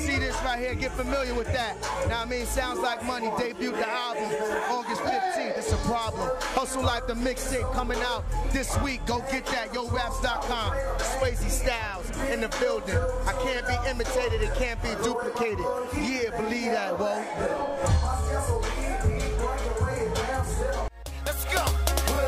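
No technical faults are audible.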